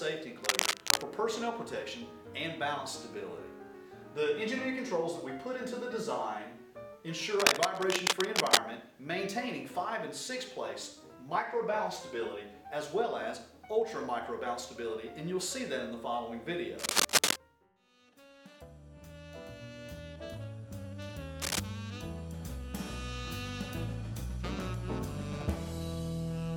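Cable scratch noise appears four times: 0.41 to 1.03 s, 7.39 to 8.61 s, 16.79 to 17.36 s, and 21.40 to 21.61 s. Ragged rustling bursts sit over the sound, about 5 dB above it in the first two, about 10 dB above in the third, and roughly level with it in the last. The likely cause is a worn connector or cable being moved, so its contact resistance flickers. A spectrogram shows dense broadband smears. The waveform shows jagged, irregular spikes.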